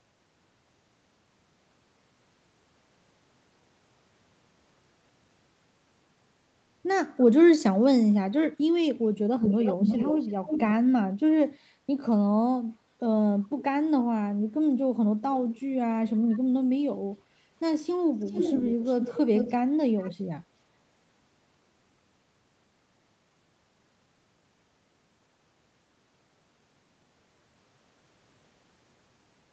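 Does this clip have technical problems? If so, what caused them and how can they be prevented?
Yes. A delayed second copy of the speech trails the original by 346 ms at 9.41–10.74 s and 16.13–16.39 s, then by 427 ms at 18.24–19.18 s, 19.35–19.56 s and 19.98–20.14 s. It is nearly as loud as the speech in some places and faint in others. This is an echo leak, likely from a far end on loudspeaker whose echo canceller sent its microphone pickup back. Headphones or stronger echo cancellation on that side would prevent it.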